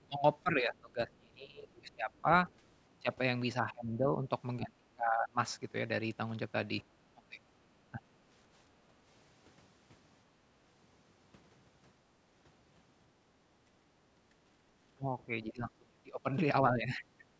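Speech suppressed in double talk appears first from 0.06 to 2.27 s: the level dips by up to roughly 25 dB over about a second and a half, likely because the echo canceller, hearing both sides at once, turned everything down. From 2.18 to 2.5 s the other side's voice leaks through faintly, far below the speech, likely as residual echo the canceller failed to remove. The same double-talk suppression returns at 3.62 to 5.38 s, then in shorter, shallower dips at 7.13 to 8.02 s and 8.88 to 8.94 s. At 13.58 to 13.79 s the background is gated by the echo canceller, dropping about 12 dB for a moment while the loudspeaker plays before recovering. From 14.95 to 17.27 s double-talk suppression again pulls the speech down sharply, and at 15.48 to 15.52 s a brief scrap of the other side's voice slips through.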